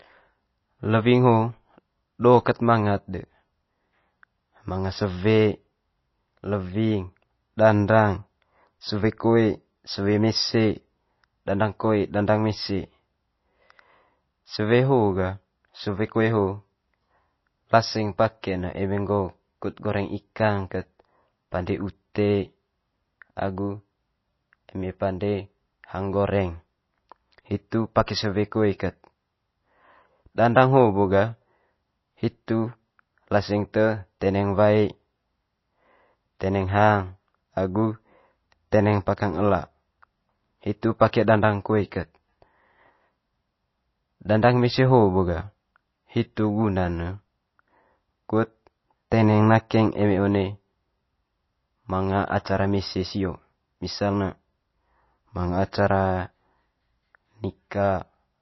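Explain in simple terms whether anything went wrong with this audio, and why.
MP3 compression, likely at a low setting, is audible from start to finish. Nothing above about 5.8 kHz survives, so the speech sounds dull and muffled, with s sounds losing their crispness. The encoder cuts the treble at a fixed point and drops quieter details it judges unimportant. Those details flicker in and out from moment to moment, giving the sound a watery, swirly quality, and sharp starts of sounds come out smeared.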